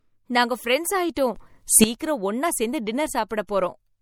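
Throughout, the speech has a watery, swirly quality with metallic chirps on s sounds. This is plainly audible codec damage, likely from MP3 compression at a low bitrate, which fits about 64 kbps. Weak frequency lines switch on and off between frames. Nothing remains above 18.9 kHz.

From 1.14 to 1.17 s, just after "நாங்க ஃபிரண்ட்ஸ்", a short hiss of about 21 ms comes before an attack. This is pre-echo. The codec spread noise across a whole block, so noise sized for the loud attack filled the quiet moment before it.

From 1.36 to 1.84 s, just before "ஒன்னா சேர்ந்து", the level changes by about 14 dB with no ramp. Speech and background noise shift together. This is a sudden gain jump, likely a digital gain setting applied abruptly.

More pre-echo follows. There is one at 1.98 s, just before "ஒன்னா சேர்ந்து", lasting 18 ms. Another comes at 3.29 s and lasts 19 ms. The last runs from 3.47 to 3.49 s and lasts 20 ms. 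Each attack is preceded by brief hiss and sounds smeared.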